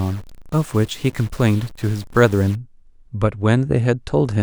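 Speech, with a likely stuck bit in the data path from 0 to 2.55 s, adding an error of about -35 dBFS that gives harsh, buzzy distortion and noise-filled pauses.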